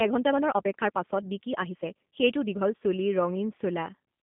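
A G.729 codec, at what sounds like its 8 kbit/s rate, carries this speech clip throughout, confining it to roughly a 150 Hz to 3.5 kHz telephone band with nothing above 3.7 kHz and leaving plainly audible rough, synthetic coding damage. From 0.0 to 2.76 s, software likely time-stretched the opening section to about 1.46 times normal speed, dropping short pieces so the pace sounds rushed while pitch stays unchanged.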